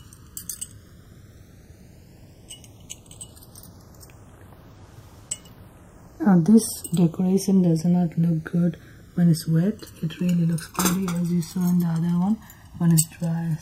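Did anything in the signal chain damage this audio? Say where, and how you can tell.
Yes. At the converter stage, the channels are drifting apart throughout: two devices on independent clocks, mismatched by roughly 150 ppm, let inter-channel delay creep to about 1 ms by the end. Summed to mono, this gives slow flanging, visible as comb notches sweeping steadily across the spectrogram.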